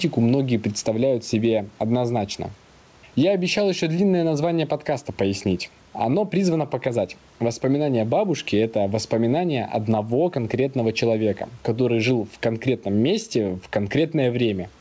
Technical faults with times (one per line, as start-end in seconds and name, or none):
0.00-14.81 gain pumping